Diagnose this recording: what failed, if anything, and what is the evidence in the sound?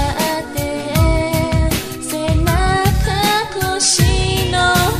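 Nothing failed, and there is no evidence of any fault in the sound.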